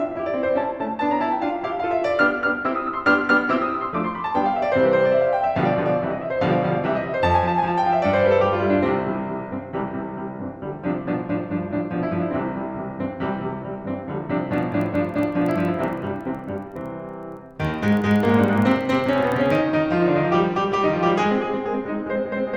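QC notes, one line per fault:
14.54 to 19.63 s: filter restarted on every block. A low buzz at about 21.5 Hz sits under the music here. The filter loses its memory at each block boundary. It restarts from silence every time. Each restart leaves a small transient. These repeat at the block rate, which fits a 2048-sample block. At that spacing the ticks fuse into a buzz. The buzz grows louder and softer with the music's level.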